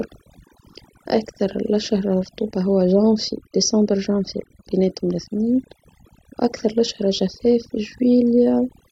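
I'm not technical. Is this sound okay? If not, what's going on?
No, not quite. This speech has overdone noise removal running the whole way through. Someone cleaned up a noisy recording with a noise reduction tool turned up too high. It hunts for anything that resembles background hiss and pushes it down, but the quieter parts of the voice get caught too. That's why the gaps sound almost dead silent with odd little twinkly specks.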